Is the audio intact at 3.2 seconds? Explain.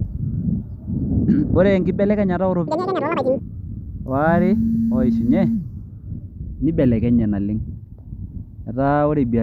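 No. At 3.2 seconds the speech falls within a stretch of audio read two samples at a time (double speed), from 2.68 to 3.39 s. Each pair of samples is taken as one frame, so the sound runs twice as fast and an octave high.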